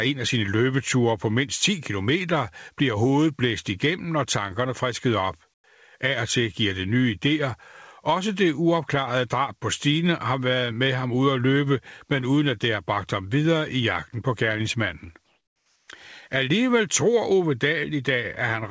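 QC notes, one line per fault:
5.54 s, after "og tankerne frisket op": comfort noise in place of the background. A 100 ms pause becomes flat, featureless hiss about 24 dB quieter, likely from discontinuous transmission. Unlike a dropout, some noise remains.
15.26–15.88 s, after "i jagten på gerningsmanden": comfort noise in place of the background. For 620 ms, steady synthetic hiss only about 4 dB quieter replaces the real room texture, likely the receiver filling a transmission pause.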